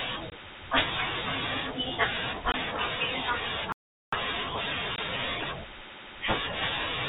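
Right at 0.3 s there's the first of three short dropouts, packet loss filled with silence. One packet's worth of speech, 20 ms, never arrived and the receiver slotted in dead air, so you get a tiny hole with hard edges. The same thing happens again at 2.52 s. Then from 3.72 to 4.12 s there's a playback stall, with the audio going quiet for about 400 ms before carrying on, likely because the player starved for data or its thread got held up. The last 20 ms packet gap lands at 4.96 s, with the same abrupt hard-edged hole, sitting in telephone-band speech that tops out around 4 kHz.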